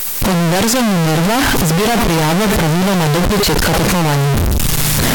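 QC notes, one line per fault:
Throughout, float read as integer: the 32-bit float samples were likely interpreted as 32-bit integers, so each value is set by the sign and exponent bits rather than the actual amplitude. The waveform collapses into a near-square shape sitting at an almost fixed, high level regardless of how soft the speech was, giving a loud, harsh buzz in which background noise is as loud as the speech. The pitch of the speech can still be followed.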